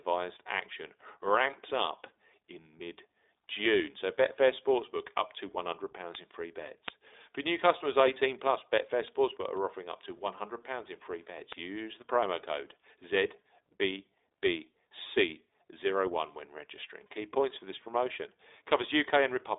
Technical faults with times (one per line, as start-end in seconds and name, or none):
0.00-19.58 iLBC codec